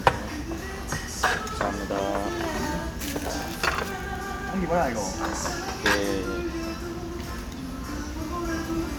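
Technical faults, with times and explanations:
No technical faults detected anywhere in the audio.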